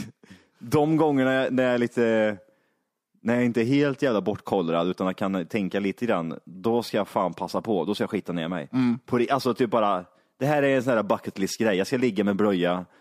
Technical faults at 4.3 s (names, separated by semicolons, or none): none